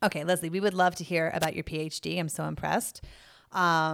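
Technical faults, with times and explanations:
1.40 to 1.46 s, wireless microphone noise hit: Right after "would love to hear", a brief burst of static swishes over the speech for about 60 ms. The radio link from an analogue FM microphone has faded for a moment. Reflected copies of the signal arrive out of step and cancel at the receiver. With less signal, the receiver's own noise rises and masks the voice. The signal returns quickly, so the hiss ends as abruptly as it began.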